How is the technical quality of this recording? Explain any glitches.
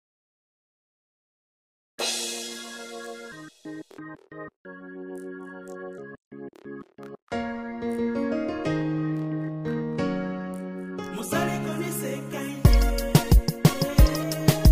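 No glitches or technical faults can be heard anywhere here.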